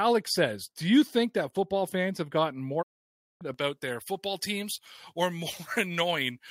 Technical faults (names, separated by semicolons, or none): digital broadcast dropout; pre-emphasis left on